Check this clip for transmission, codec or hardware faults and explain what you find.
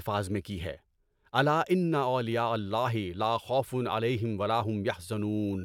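Nothing here points to a transmission, codec or hardware problem; the speech comes across steady and intact, with nothing to flag.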